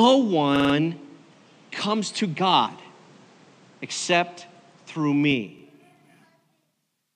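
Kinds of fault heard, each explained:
Input switched to a poorer device, 0.0 to 5.3 s: The opening stretch is band-limited, with nothing above 9.2 kHz and background noise about 30 dB below the sound. At 5.3 s it clears to full bandwidth with no gap or level jump. The likely cause is a lower-quality input device in use until then.
Repeated buffer, 0.56 to 0.74 s and 5.59 to 5.63 s: When fresh audio arrived late, the last block of about 46 ms, which fits a 2048-sample buffer, was replayed. It plays four extra times in the first event, a short stutter, and once in the second, a brief hard-edged hiccup.
Damaged data in a compressed stream, 2.63 to 2.67 s: Corrupted bytes in the encoded stream make the decoder misread a frame and lose sync before locking onto the next valid header. The result is a short blip of about 40 ms.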